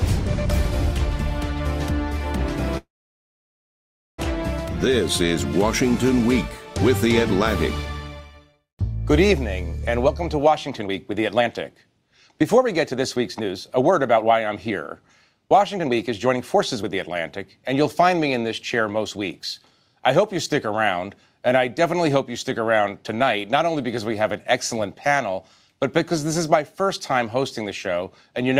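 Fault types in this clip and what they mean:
Call audio freeze: from 2.77 to 4.20 s the sound stalls. A brief trailing continuation gives way to about 1.3 s of silence, then the audio resumes where it stopped with nothing lost, likely because delayed packets left the receiver's buffer empty for about 1.4 s.
Jitter buffer speed-up: at 10.07 to 11.45 s (125% speed), 12.42 to 14.71 s (123%) and 15.45 to 19.17 s (113%) the audio runs hurried at unchanged pitch. The receiver trims short pitch-period slices to work off a backlog, roughly 0.4 s, 0.5 s and 0.5 s respectively.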